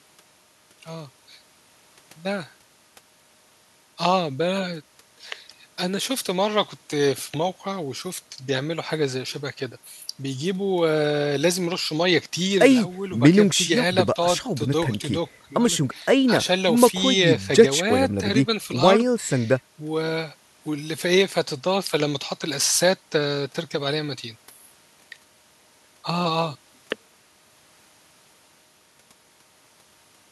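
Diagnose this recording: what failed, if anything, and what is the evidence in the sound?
Nothing in this recording points to a failure at any stage of the chain. The speech continues with no audible event that would mark a fault anywhere along the path.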